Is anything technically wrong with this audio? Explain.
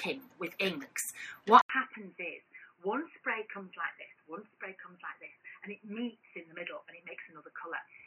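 Yes. At 1.61 s the sound cuts out for about 80 ms, then returns dull and boxy, with nothing above 3 kHz, roughly 10 dB quieter, and with a new background noise sitting well below the signal, around 40 dB down. It stays that way to the end. This is likely an input switched to a poorer device, such as a different microphone or a headset's call profile, which passes a narrower band and has its own level and noise.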